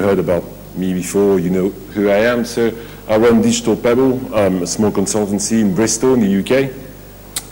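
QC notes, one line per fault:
Throughout, video or display buzz: picture circuitry couples in a 50 Hz field-rate buzz with hash, plus a 15.6 kHz line tone, roughly 25 dB below the audio.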